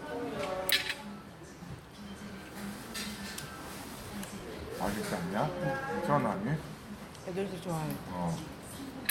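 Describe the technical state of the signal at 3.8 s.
At 3.79 to 3.81 s the sound jumps abruptly forward with no gap. This skip ahead drops roughly 0.7 s of audio that was discarded in transit or by an overflowing jitter buffer. From 3.89 to 4.70 s the audio then runs hurried at unchanged pitch, about 112% speed. This jitter buffer speed-up trims short pitch-period slices, about a tenth of a second in total, to reduce accumulated delay.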